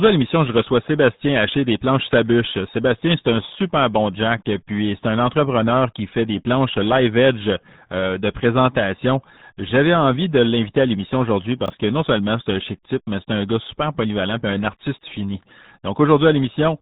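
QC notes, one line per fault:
Throughout: RealAudio 14.4 codec. The speech is squeezed through an 8 kbit/s dial-up speech coder, so nothing above about 3.9 kHz survives and heavy coding damage leaves it muffled and gargly. That gargle sets it apart from a simple low-pass filter, which would only dull the sound.
11.66–11.70 s: chunks out of order, just after "l'inviter à l'émission aujourd'hui" and before "que non seulement c'est". A short slice plays after the slice that should follow it, which fits 20 ms chunks with one arriving a chunk late. Nothing is missing, unlike a dropout, but the jumbled order and three hard joins give a brief garbled moment.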